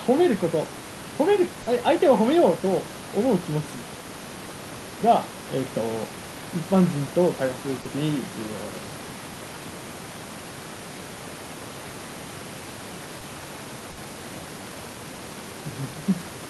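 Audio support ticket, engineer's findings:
Short concealed packet loss, four spots: 0.65–0.67 s, 1.62–1.67 s, 7.81–7.86 s, 13.20 s. Brief smears and wobbles in the speech, the longer two about 40 ms each, the others about 10 ms. Probable component: network path plus receiver jitter buffer. Packets arrived too late or not at all, so the decoder's concealment extended the previous sound, pitch-based if voiced, shaped noise if not, then crossfaded back.

Burst of packet loss at 13.91–13.98 s, only about 0.7 s after the 13.20 s dropout. Roughly 60 ms of audio missing, heard as a held buzz or fading hiss, then the speech jumps ahead. Same suspects: network and jitter buffer. Several consecutive packets were lost, so concealment repeated the last sound while ramping it down until real audio resumed. The room noise, about 18 dB below the speech, is part of the recording, not the fault.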